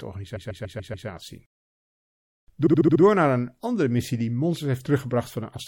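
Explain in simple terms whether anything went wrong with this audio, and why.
Repeated frames, from 0.35 to 1.07 s and again from 2.65 to 3.01 s: a short chunk of the speech plays over and over, six times in a row, causing a stutter. The first chunk lasts 0.14 s, the second 0.07 s, so the clip runs about a second longer.

MP3 compression, throughout: the speech sounds watery and swirly, with dull treble and metallic chirps on s sounds. This is likely from squeezing the file too hard, so the encoder cut off the highest frequencies and let quiet details flicker in and out.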